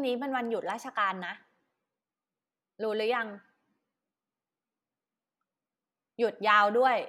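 A speech recording with no technical faults that can be heard anywhere in the signal.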